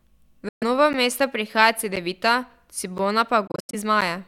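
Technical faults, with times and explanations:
0.48–0.63 s, Bluetooth dropout: the speech drops to silence for about 128 ms, then picks up further along as if it had kept playing underneath. The likely cause is wireless packets arriving too late and being discarded, which fits around six lost frames.
0.93–4.02 s, periodic USB or driver dropouts: about four brief silent gaps, each roughly 10 ms, recur every 1.02 s and are heard as regular ticks against the speech. A background task stalling the bus or audio driver at a fixed interval starves the output.
3.47–3.75 s, Bluetooth dropout: several short holes are scattered across about 256 ms, removing about 171 ms of speech in total, the longest run 85.3 ms. Playback resumes later each time, pointing likely to bursts of late wireless packets, fitting about eight lost frames.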